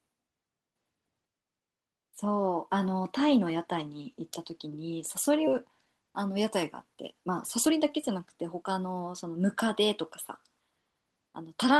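At 5.47 to 5.49 s a stretch of speech was dropped while later audio was already queued, a skip ahead. Roughly seven-tenths of a second never plays. Nothing fills the hole, so the speech on either side is butted together with no audible pause, and the line lurches forward, cutting away part of what was being said.

Right after, the jitter buffer is holding more audio than its target, so the receiver trims it back with a jitter buffer speed-up. It repeatedly removes tiny slices of a pitch period or a few at a time. From 5.85 to 6.44 s the speech runs at 109 percent, shedding around 70 ms. From 6.87 to 9.48 s it runs at 111 percent, shedding around 300 ms. Pitch stays put, but the talker sounds hurried.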